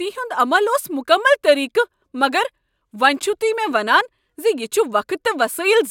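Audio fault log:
No faults found in the speech clip; nothing to log.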